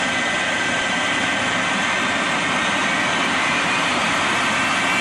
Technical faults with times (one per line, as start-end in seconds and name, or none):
0.81 compressed frames skipped
3.09 compressed frames skipped